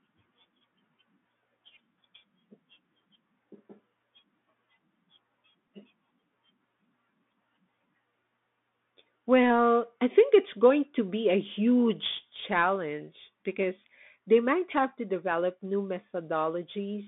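Bluetooth CVSD headset codec, throughout: the speech has been squeezed through the narrowband headset link, leaving a line band of roughly 200 Hz to 3.6 kHz, which fits a 64 kbps CVSD stream. The coder sends a single up-or-down bit per sample with an adapting step, so it cannot keep pace with sharp, loud high-frequency detail. The damage is plainly audible: s sounds come out scratchy and a grainy hiss sits beneath the voice.

Bluetooth headset packet repeated, at 5.68 s: about 7.5 ms of the link dropped out, which fits two lost headset packets, and the chip filled the gap by decoding the previous packet's bits again rather than leaving silence. Because the repeat is so brief, it does not build into the sustained buzz a longer run would produce.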